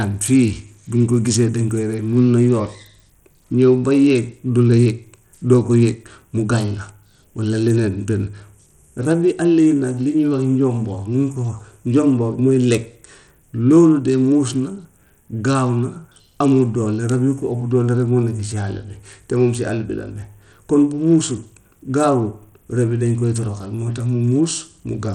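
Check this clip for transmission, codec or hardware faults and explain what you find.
One codec fault runs through the whole clip. Bluetooth SBC compression, likely at a starved bit pool around 80 kbps, strips bits from the upper sub-bands, so the treble flickers, gritty noise rides the speech, and nothing remains above 18.3 kHz.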